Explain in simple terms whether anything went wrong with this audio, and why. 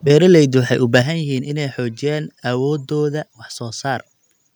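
Microphone overload, from 0.95 to 0.99 s, just after "waxay u": the loudest moment of speech crackles harshly because its peaks were flattened at the top, most likely because the microphone's input level was set too high for what it was picking up.

Microphone volume stepped down, at 1.02 s, just before "yihiin inay": the speech and the background suddenly get quieter in a single jump. This is most likely the call software reacting to that distorted peak by turning the microphone's input level down in one move.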